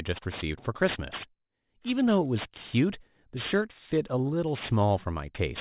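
Speech with aliasing throughout: sibilants sound gritty and metallic, mirrored around 4 kHz, which fits an unfiltered drop to an 8 kHz rate. Plain band-limiting would sound dull instead.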